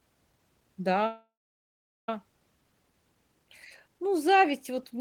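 At 1.06 s the speech stalls in a call audio freeze lasting until 2.09 s. The last sound is drawn out into a brief fading buzz or hiss, and then about 0.77 s of silence follows. The likely cause is packets held up in transit, letting the receiver's jitter buffer run dry. When audio resumes it picks up exactly where it stopped, with nothing lost, so the roughly 1.02 s gap shifts everything after it later by the same amount.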